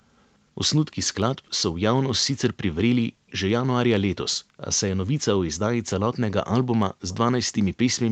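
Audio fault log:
0.21–0.28 s, 1.04–1.10 s, 1.50–1.57 s and 3.27–3.31 s, echo leak: the likely cause is a far end playing the call on a loudspeaker whose echo canceller failed to fully remove what its microphone picked up, sending a remnant back. Each time a faint, delayed copy of the speech appears about 180 ms behind the original. It is very quiet, roughly 30 to 40 dB below the speech, and brief rather than sustained.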